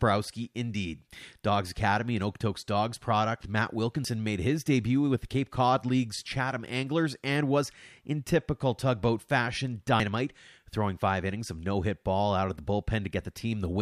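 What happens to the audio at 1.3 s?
Nothing goes wrong at 1.3 s; the speech carries on intact through that moment with no audible fault.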